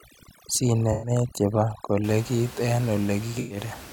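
From the start to 2.04 s, overdone noise removal is at work: a noise reducer set far too aggressively keeps pulling individual frequency bands down or shutting them off whenever they sit close to its noise estimate, and the quieter parts of the speech get caught with them. The room noise, about 17 dB below the speech, drops and breaks up into twinkling, warbling specks.

Inside that stretch, from 0.92 to 1.11 s, comes the first AAC frame loss with concealment. Around 107 ms of audio is missing, which fits five lost AAC frames. The decoder patches the gap by reusing the last good spectrum, with altered signs or interpolated energy, and the patch comes out as a brief smeared, noisy, phasey blur. The same thing happens again from 3.40 to 3.58 s, another gap of about 107 ms that is covered over the same way.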